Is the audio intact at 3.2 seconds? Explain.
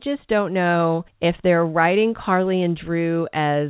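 Yes, the audio is intact at 3.2 seconds, with the speech carried cleanly through the call path, its band-limited sound stopping at about 4 kHz as expected for a narrowband telephone codec such as G.711.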